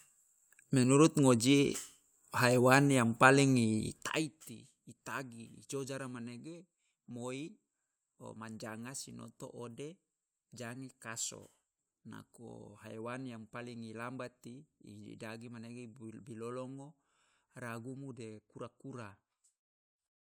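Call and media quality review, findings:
Zipper noise, 3.88–4.37 s after "ngoji haiwan yang paling": gain drops about 15 dB in raw 1 dB steps, around 30 a second, ticking audibly. Gain control unsmoothed.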